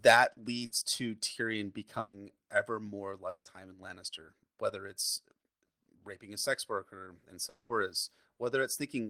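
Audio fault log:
0.65 to 0.73 s and 1.99 to 2.15 s, burst of packet loss: the sound is carried on and faded for about 60 ms and 140 ms, then resumes, the second time at "ever more", with that stretch missing. Unlike the dropouts, the second fade never reaches silence.
3.29 to 3.47 s and 7.49 to 7.71 s, long network dropout: after "ever more" and after "a sex worker and", the last sound is stretched into a fading buzz or hiss before the audio returns with a piece gone. The first gap fades into about 70 ms of silence and the second into about 10 ms, the mark of a likely longer loss in transit.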